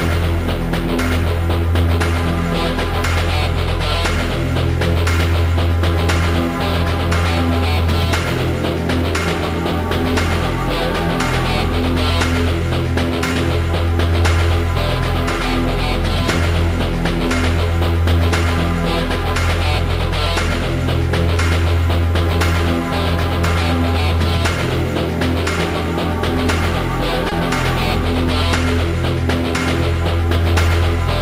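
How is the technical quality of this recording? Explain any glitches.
Two brief glitches stand out, both short concealed packet loss, at 13.33–13.37 s and 27.29–27.33 s. Each time about 20 ms of audio failed to arrive, and the receiver bridged the gap by extending the preceding sound, then crossfaded back into the real signal. It's heard as a tiny smear or wobble. On a spectrogram, each spot shows a short band of repeated or flattened harmonics, or diffuse noise. The waveform shows a looped, overly regular stretch with a slight seam at either end.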